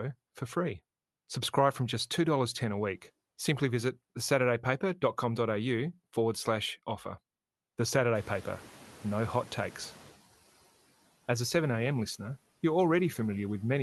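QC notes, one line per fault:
8.15–10.15 s, noise suppressor catching up: the room noise jumps around 8 s and comes through with little reduction at first, then fades by about 9 dB over two seconds as the suppressor's noise estimate adapts.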